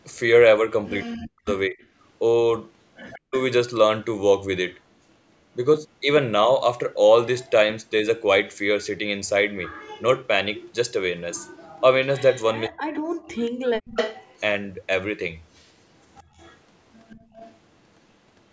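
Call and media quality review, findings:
Speech suppressed in double talk, 1.04–1.8 s, 3.16–3.36 s, 12.67–13.28 s. Talker ducks by as much as about 40 dB while the far end also speaks, about half a second lost in the first and third spans and a fifth of a second in the second. Likely cause: echo canceller unable to separate near talker from loudspeaker echo. Waveform shows the envelope notched out. Spectrogram shows speech energy collapsing across the band and then returning.

Echo leak, 3.11–3.19 s, 7.37–7.5 s, 9.64–14.4 s, 16.17–17.58 s. Faint delayed copy of the speech trailing it by 179 ms, roughly 20 to 30 dB below the direct signal and strongest in the long 9.64–14.4 s stretch. Likely cause: residual loudspeaker echo on the far end passing its canceller. Spectrogram shows ghost formant tracks offset by 179 ms. Waveform shows a low secondary envelope after each burst.

Background gated by the echo canceller, 16.23–17.29 s. 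Room tone drops by up to about 20 dB in brief holes totalling around 150 ms, then returns. Cause: canceller clamping the microphone during loudspeaker playback. Spectrogram shows the noise floor blanking out into dark vertical gaps. Waveform shows the quiet floor flattening to near silence. Call microphone band tops out at 8 kHz as expected.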